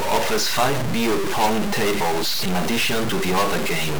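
A harsh, buzzy distortion runs through the whole speech clip. It points to a stuck bit, likely one data line held at a fixed value. Samples jump by a step of roughly -20 dBFS. Even the pauses fill with grainy noise.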